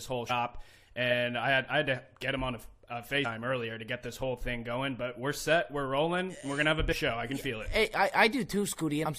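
Short blips at 0.29, 3.24, 6.91 to 6.93 and 9.05 s come from damaged data in a compressed stream. Bad bytes make the decoder misread frames and lose sync until it finds the next frame header, giving brief glitches, each about 20 ms or less.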